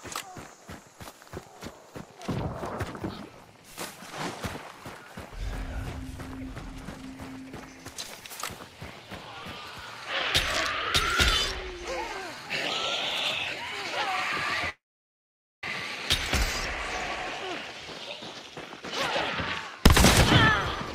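At 14.69–15.64 s a call audio freeze leaves a brief fading buzz, then 0.85 s of flat waveform, likely from a starved jitter buffer; nothing is lost.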